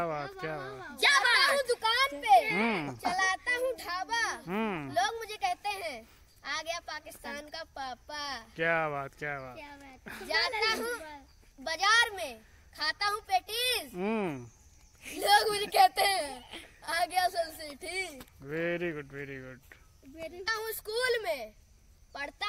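Nothing goes wrong anywhere in the audio, so there's no fault to point to at any moment.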